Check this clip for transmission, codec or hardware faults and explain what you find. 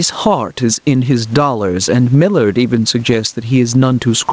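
One fault is present, throughout the clip: gain pumping. The gain ducks by around 15 dB under each loud passage, likely from excessive input gain being clamped by a fast limiter.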